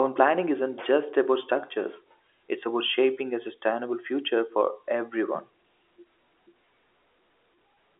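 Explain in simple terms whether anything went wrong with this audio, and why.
Nothing went wrong; this is ordinary telephone-line speech.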